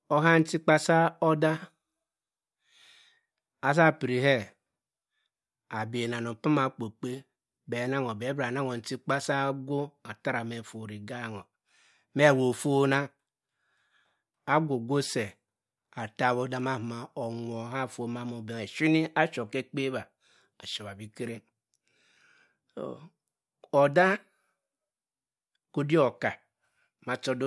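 No technical faults can be heard anywhere in the recording.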